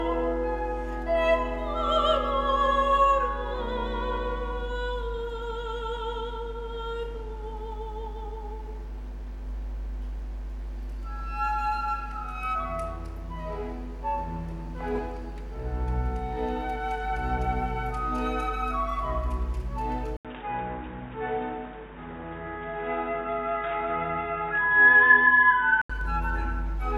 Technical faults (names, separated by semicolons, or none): input switched to a poorer device